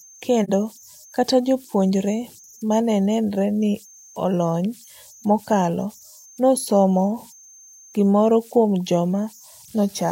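From the start and throughout, converter idle tones sit about 28 dB below the speech: an undithered delta-sigma converter cycles through repeating bit patterns on small inputs, leaving a faint whistle around 7 kHz in pauses. A spectrogram shows a thin horizontal line there.

At 0.44 to 0.50 s comes AAC frame loss with muting. A gap of about 43 ms, which fits a single lost frame, had its spectrum zeroed, so the sound fades smoothly out and back. The waveform shows a tapered hole, and the spectrogram a clean vertical gap.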